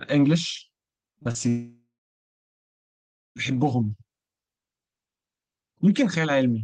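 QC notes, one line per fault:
1.13 to 1.37 s, repeated packet loss (robotic sound): four short holes, the longest about 34 ms, patched by stretching the previous sound, so roughly 40% of this stretch is filler. That's why it goes choppy, with bits of the speech missing.
1.49 to 3.38 s, long network dropout: the sound smears into a fading buzz, then goes quiet for about 1.5 s before speech picks up again with that whole stretch gone. The likely cause is audio not arriving at all, so the receiver could only extend, then give up.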